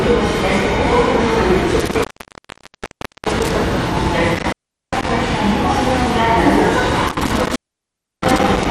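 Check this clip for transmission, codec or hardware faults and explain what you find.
Two faults are audible. One runs throughout. The other strikes three times.

MP2 compression, likely, runs the whole clip. Starved upper sub-bands switch off, so nothing sounds above 14.3 kHz. The sound is dull and gurgling, which fits roughly 64 kbps.

Intermittent contact occurs at 1.80 to 3.51 s, 4.35 to 5.09 s and 7.07 to 8.66 s. A loose connection opens for 1.23 s, 0.40 s and 0.67 s. The sound drops out with crackle at each edge.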